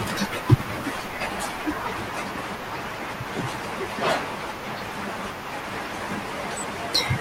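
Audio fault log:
3.01 s, 5.83 s: compressed frames skipped. Roughly three to four 20 ms frames of the speech never reach the output, likely missing or rejected as damaged, so about 70 ms is lost each time and the speech jumps ahead at the join.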